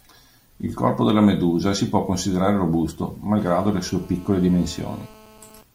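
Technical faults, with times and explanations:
3.39–5.62 s, GSM phone buzz: a 2G phone in a call nearby transmits in bursts about 217 times a second, and the audio circuit rectifies those radio pulses. Right after "si può considerare robusto" a steady, raspy 217 Hz buzz rich in harmonics sits about 26 dB below the speech, unrelated to it.
5.63 s, GSM signalling bursts: with the call still open but the talker silent, the phone sends only a brief group of radio bursts, which the circuit again rectifies. The result is a single short tick of 217 Hz buzz, roughly 25 dB below the speech.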